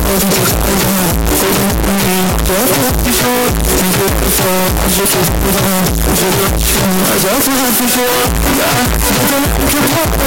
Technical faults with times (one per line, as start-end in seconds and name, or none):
0.00-10.27 signed and unsigned mixed up